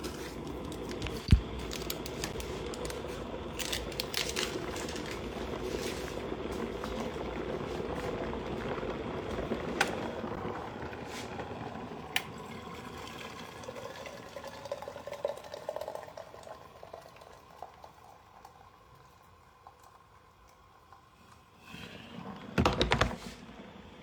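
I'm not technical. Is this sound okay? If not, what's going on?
No. At 2.33 s and 10.36 s the sound briefly drops out with sharp edges, a blink of about 10 milliseconds. This is a gap between stream segments: the audio arrives in 4-second pieces, and two joins were timed slightly apart, so silence fills the space. Nothing is actually lost.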